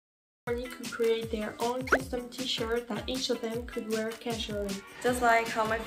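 The first 0.47 s is digital silence, then sound enters mid-event with no attack or fade: a cut-off start, unlike a fade-in, which would ramp up gradually. Throughout, a block size mismatch (padded) inserts a tiny zero gap in every block, producing a steady 43.1 Hz buzz, which fits a 1024-sample read block. Unlike random dropouts, the gaps are perfectly regular, and the speed stays at 0.999x.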